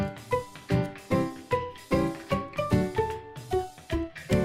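No technical faults are audible.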